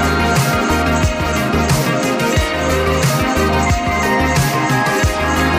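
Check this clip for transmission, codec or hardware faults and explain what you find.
One fault is present, a corrupt frame decoded from 4.53 to 4.55 s. Bits in a couple of compressed frames were damaged and the decoder played them anyway, so misread gains and codes threw energy to wrong frequencies, producing a short, fairly loud chirp-like blip peaking around -10 dBFS.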